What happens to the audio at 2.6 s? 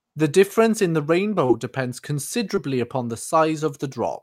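At 2.55 to 2.59 s, just before "upon the", there is a short concealed packet loss. About 20 ms of audio failed to arrive, and the receiver bridged 15 ms by extending the preceding sound before crossfading back, leaving a brief smeared wobble.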